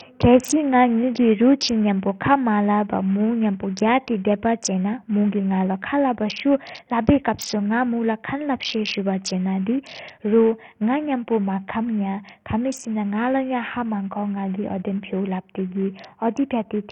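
Speech, with heavy damage throughout. The treble flickers and stops near 16.7 kHz, over gritty noise. Likely Bluetooth SBC compression, starved of bits, which fits about 48 kbps.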